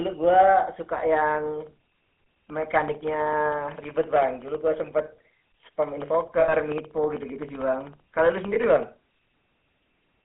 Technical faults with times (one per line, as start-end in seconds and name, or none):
0.00-10.25 GSM full-rate codec
6.40-6.54 lost GSM frames
8.54-8.58 lost GSM frames